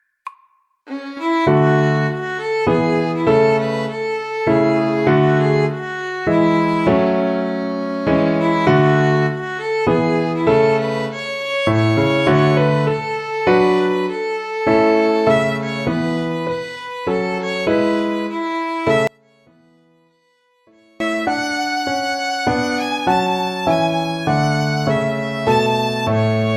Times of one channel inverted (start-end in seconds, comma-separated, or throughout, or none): 19.07-21.00